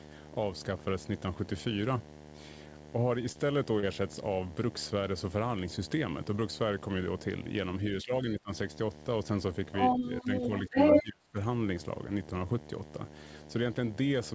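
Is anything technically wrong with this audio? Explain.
Yes. Four kinds of fault are audible.

A video or display buzz runs through the whole clip. A screen or video cable is coupling into the audio. It gives a steady 75 Hz buzz with hash above it, about 15 dB under the speech.

Short concealed packet loss occurs twice, at 3.32 to 3.37 s and 3.79 to 3.85 s. About 30 ms went missing each time. The receiver extended the preceding sound to fill the gap, then blended back. Each spot is a brief smear or wobble.

Speech is suppressed in double talk at 7.90 to 8.51 s, 10.22 to 10.29 s, 10.68 to 10.76 s and 11.02 to 11.38 s. The echo canceller likely could not separate the talker from the loudspeaker echo and turned both down. The voice dips, by roughly 20 dB first, about 10 dB in the middle two, and about 35 dB at the end.

The other side's voice leaks through from 9.73 to 11.04 s. A second voice comes through, roughly 10 dB under the talker. 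The likely cause is echo the canceller did not fully remove from the microphone. The band stops at 8 kHz, as expected for G.722.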